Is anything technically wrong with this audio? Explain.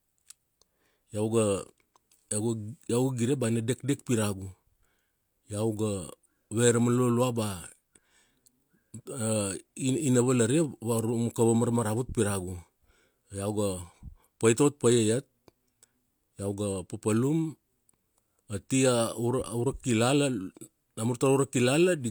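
No, nothing technically wrong can be heard here.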